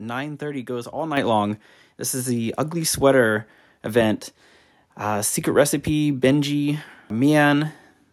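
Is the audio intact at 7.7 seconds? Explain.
Yes, at 7.7 seconds the speech plays through cleanly, with no audible dropout, click, distortion or other fault.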